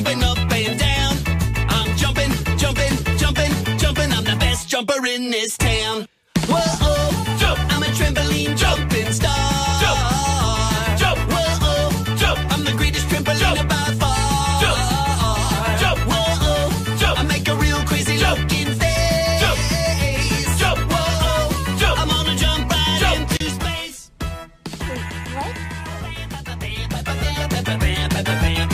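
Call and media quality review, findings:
No signal-path issues found: level, continuity and timing of the audio hold steady across the whole clip.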